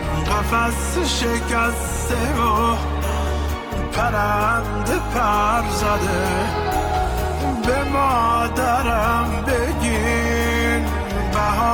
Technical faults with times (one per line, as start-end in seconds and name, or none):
1.57-11.73 adaptive stream at a lower bitrate